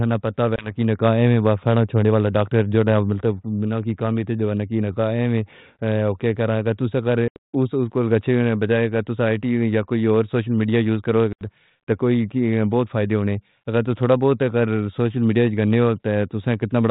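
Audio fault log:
0.56 to 11.46 s, packet loss on an ADPCM call: audio went missing at 0.56 s after "نہ پتہ", at 7.28 s after "توساں غر", and at 11.33 s after "سوشل میڈیا یوز کرو". Each time, a hard-edged silent hole replaced the missing audio, about 20 ms at 0.56 s and 80 ms at the later two, which suggests a couple of packets and then several. The receiving decoder's adaptive predictor and step size fell out of step with the sender's, so after each gap the sound came back slightly distorted and settled within tens of milliseconds. This happened over the 32 kbit/s G.726 link.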